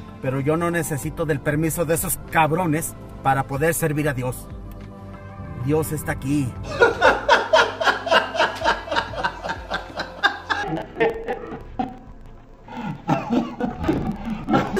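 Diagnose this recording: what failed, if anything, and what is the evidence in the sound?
Sample-format conversion: interleaved audio read as planar from 10.63 s. Split 46 ms blocks play at half speed, octave-low and doubled. The spectrogram shows halved harmonics and vertical seams at 21.5 Hz.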